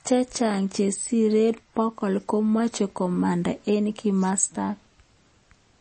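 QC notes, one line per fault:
Throughout: likely MP3 compression. Treble stops sharply at 8.3 kHz, with plainly audible watery artefacts as weak frequency lines drop out, which fits a bitrate around 32 kbps.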